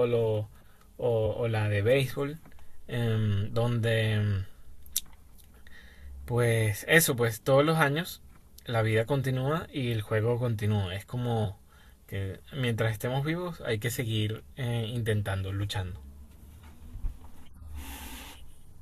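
Compressed frames skipped at 4.68 s and 11.44 s: the decoder drops whole frames and the speech jumps ahead, about 20 ms the first time and 40 ms the second, consistent with one and two frames.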